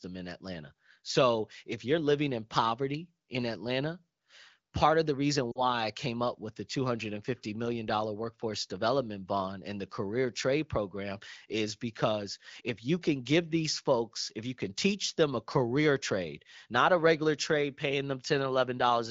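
Speech clip, carried over the AMR wideband (HD Voice) codec at a rate that sounds clear, with lost AMR speech frames at 5.52 to 5.61 s. About 40 ms of audio went missing, which fits two 20 ms frames. The decoder bridged the gap by repeating its last good pitch and vocal tract settings at falling level, so the speech briefly smears and dips. In a waveform the envelope sags there, and a spectrogram shows blurred, repeated harmonics thinning out before speech resumes, weak or rough for a moment.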